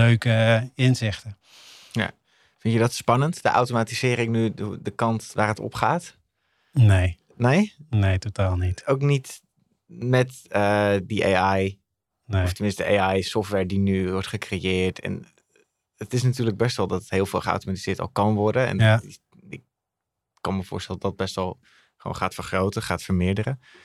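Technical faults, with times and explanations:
No technical faults are present in this speech recording.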